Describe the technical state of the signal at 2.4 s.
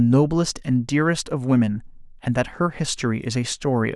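At 2.4 s the speech signal is intact, with no audible technical fault at that moment.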